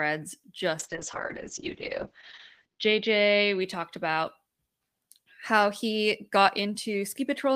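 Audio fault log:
0.81–3.67 s, call bitrate drop: the speech turns coarse and watery, then clears just before "talked about". The encoder was pushed from about 32 kbps down to something near 7 kbps, where it sat for about 1.9 s, coding each frame with far fewer bits and discarding everything above 8 kHz. On a spectrogram the energy above 8 kHz vanishes abruptly, leaving a flat ceiling, and the remaining harmonics look smeared and blotchy until full bandwidth returns.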